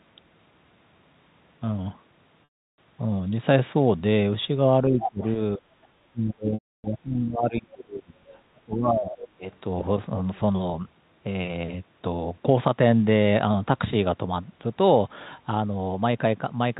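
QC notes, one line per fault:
2.44–2.78 s and 6.54–6.84 s, packet loss with pitch repetition: gaps of 340 ms and 300 ms open with a brief buzzy, held tone before fading into silence, then the sound returns through a short cross-fade. The held buzz distinguishes it from a plain level dip.
4.88–5.23 s, 5.58–5.94 s, 6.12–8.24 s and 8.51–9.44 s, speech suppressed in double talk: the talker dips by up to about 20 to 25 dB, dulled or broken into pieces. The longest stretch lasts around two seconds. It is likely an echo canceller ducking both talkers at once. The level falls with no repeated tone.
4.99–5.32 s and 8.28–8.35 s, other side's voice leaking through: a second voice sits close to the talker's level in the first span, about 5 dB below. It is about 30 dB down in the second. The likely cause is loudspeaker echo the canceller left in. Unlike suppression, this adds sound rather than removing it.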